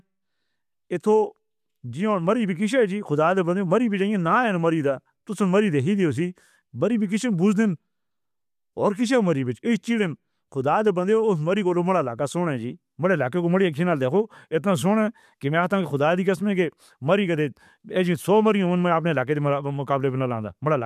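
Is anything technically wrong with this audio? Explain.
No, nothing stood out as technically wrong on listening to this speech recording.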